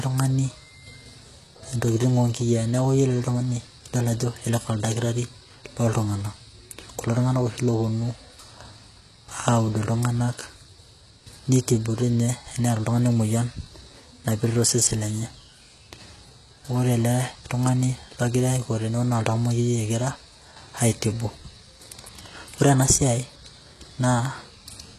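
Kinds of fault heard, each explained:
HE-AAC compression: The speech was likely squeezed through a very low-rate codec, consistent with 16 kbps HE-AAC, which codes only the lower spectrum and fakes the treble by copying lower bands upward. Throughout, s sounds turn gritty and metallic, and nothing reaches above 12.4 kHz.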